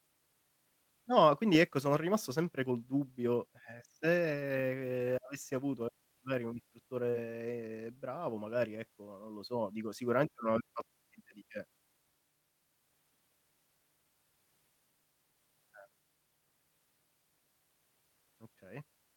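Short concealed packet loss at 7.09–7.16 s, just after "avessi avuto magari un": about 40 ms never arrived, so the decoder extended the preceding speech, leaving a brief smeared wobble.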